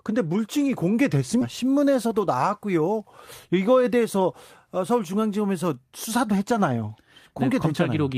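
At 1.41 to 1.43 s a skip ahead drops roughly 0.4 s of speech with no gap; the waveform joins abruptly, and spectrogram harmonics break without silence. From 2.05 to 2.50 s a jitter buffer speed-up trims pitch periods, running about 7% fast at unchanged pitch; the spectrogram shows compressed timing but level harmonics.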